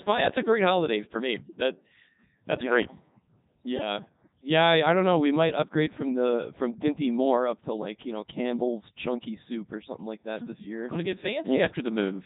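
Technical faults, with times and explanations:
Throughout, Codec 2 vocoder: heavily robotic, buzzy speech with nothing above 3.9 kHz. Sine waves rebuild the voice in the 3.2 kbit/s mode.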